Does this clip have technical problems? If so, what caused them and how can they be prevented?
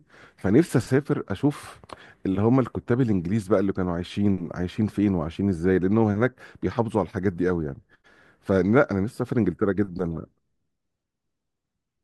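No, the speech signal holds steady throughout, with no audible technical faults, so there is nothing here that needs preventing.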